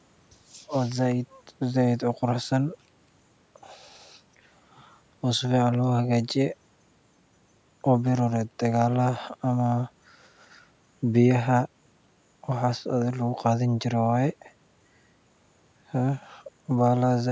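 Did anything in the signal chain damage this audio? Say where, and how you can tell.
No, the signal chain left this speech undamaged.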